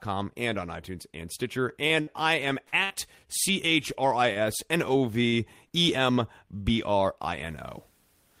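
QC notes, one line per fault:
1.69–2.93 s, repeated packet loss (robotic sound): five holes, the longest 58 ms, each patched by extending the previous sound. This gives a choppy stretch with pieces missing, unlike a single stall.
3.15–3.83 s, jitter buffer slow-down: repeated pitch periods add 49 ms, so the sound plays at 95% speed at unchanged pitch and is drawn out, with nothing lost.
4.33 s and 5.28 s, short stall from a late packet: the sound is held 30 ms, then 43 ms, while waiting for the late packet. It resumes at the same point, so nothing is missing, unlike a skip.
5.68–5.73 s, skip ahead: around 70 ms of audio is dropped and the two sides are joined almost directly with only a brief 14 ms patch, so the sound jumps forward rather than holding.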